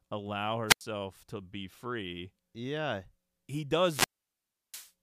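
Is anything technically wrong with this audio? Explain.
Yes. There are two wireless microphone squelch dropouts, at 0.68 to 0.81 s (muted about 87 ms) and 3.82 to 4.92 s (muted about 0.7 s). The radio signal fades, hiss rises, the receiver's squelch mutes the output into near silence, and the speech returns.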